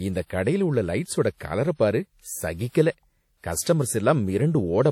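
WMA compression runs throughout the speech, its damage plainly audible, with nothing above 17.3 kHz. The likely cause is a WMA 1 encoder at a rate fitting 48 kbps, whose long transform blocks smear quantisation noise, giving ringing, washy sound and hiss that breathes with the signal.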